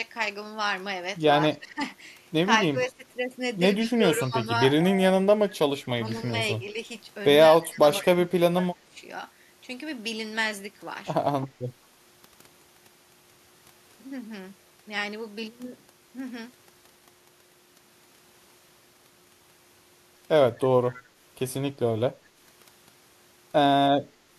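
Speech in this clip dips sharply and loses level in patches at 1.53–1.83, 2.72–3.07, 3.84–4.48, 4.81–5.28, 5.98–6.77 and 7.51–8.96 s, mostly by around 20 dB, once by about 15 dB and once only slightly. The likely cause is speech suppressed in double talk: an echo canceller turning down the talker while the far end spoke. Within the last of those dips, at 8.02–8.06 s, a faint delayed scrap of the voice arrives about 195 ms late, roughly 20 dB below the speech. This is likely an echo leak, where loudspeaker sound reached the microphone and slipped past cancellation.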